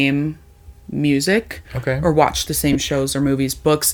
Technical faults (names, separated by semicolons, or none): lost LE Audio frames